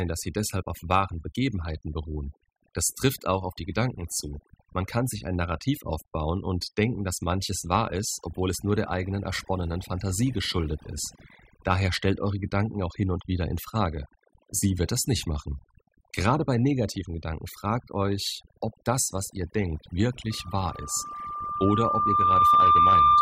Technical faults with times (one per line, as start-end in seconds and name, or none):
0.00-23.21 overdone noise removal
20.30-23.21 loudspeaker feedback squeal